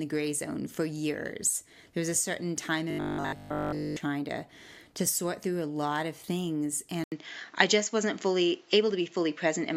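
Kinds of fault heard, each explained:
Robotic sound from repeated short buffers: audio likely arrived too seldom, so about 20 ms kept looping, leaving a rigid, metallic 50 Hz buzz in place of the speech.
Input switched to a poorer device: the input likely changed to a weaker microphone, so after an 80 ms gap the sound turns dull, with a small level shift and faint new background noise.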